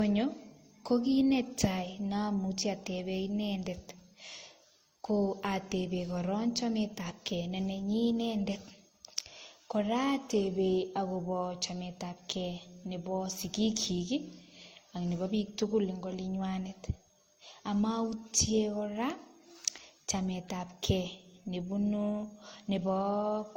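From start to finish the speech carries a mix of coding artefacts that don't belong to one codec: the artefacts of several codecs are heard together, band-limited, with nothing above 16.6 kHz. That layering is what separates it from a single low-bitrate encode, which leaves one consistent kind of damage. The likely cause is transcoding between lossy codecs, with the sound pointing to an Opus and HE-AAC stage before a final MP3.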